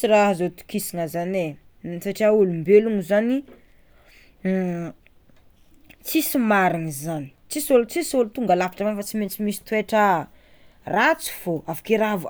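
No technical faults can be heard anywhere in the speech recording, with the signal holding steady in level and continuity throughout.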